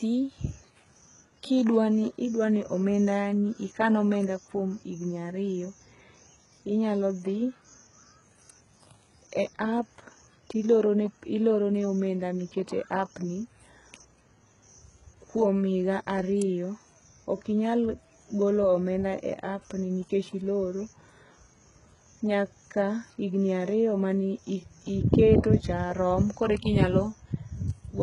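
Speech, likely HE-AAC compressed at a very low bitrate near 12 kbps throughout, so rebuilt treble turns s sounds gritty and metallic, with nothing above 11.1 kHz.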